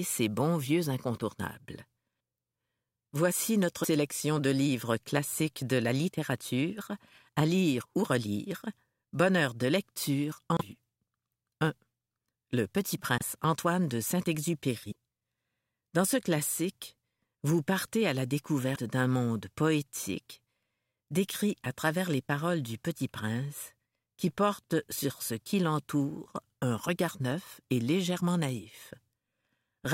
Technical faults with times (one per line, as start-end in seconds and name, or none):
3.83-3.86 broken MP3 bit reservoir
10.57-10.61 broken MP3 bit reservoir
13.18-13.22 broken MP3 bit reservoir
14.90-14.93 broken MP3 bit reservoir
18.74-18.78 broken MP3 bit reservoir